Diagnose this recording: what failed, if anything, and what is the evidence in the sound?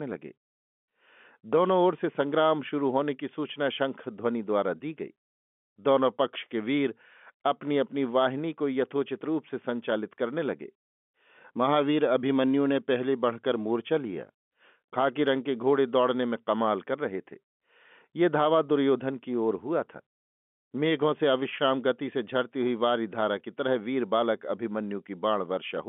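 Nothing stood out on listening: the speech comes across as an ordinary G.711 telephone line, with the narrow band that format brings and no fault to point to at any stage.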